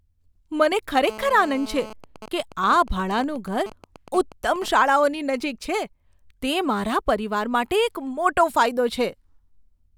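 From 1.09 to 1.93 s, GSM phone buzz sits under the speech: a nearby 2G handset in a call transmits about 217 bursts per second, and the audio circuit rectifies them into a hard, raspy 217 Hz buzz full of harmonics, steady and about 16 dB below the speech. From 2.04 to 4.68 s, the phone's talker falls silent and only GSM signalling bursts remain, at a similarly low level. Continuous buzz gives way to even ticks with a longer 217 Hz buzz twice a second, intermittent groups rather than an unbroken tone.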